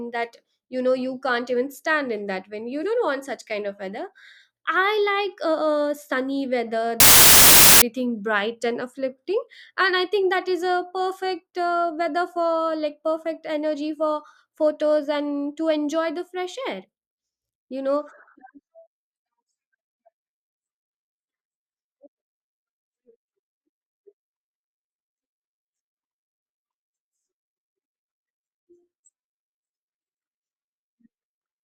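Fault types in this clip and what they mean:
Samples built from the wrong bytes: after "uh uh sunny weather", 7.00 to 7.82 s turns into loud, harsh broadband noise, as each sample's bytes are misassembled so the restless low bits dominate; unlike background hiss, it replaces the speech rather than sitting beneath it, ending before "bright and uplifting and".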